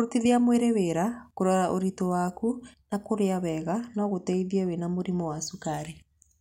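From 3.49 to 5.74 s, just after "ũritũ waku na kũrĩa", the speech turns dull through channel delay (comb filtering). One channel lags by only a couple of samples, roughly 0.05 ms, so the mono sum cancels energy around 10 kHz. Unlike flanging, that notch stays fixed rather than sweeping.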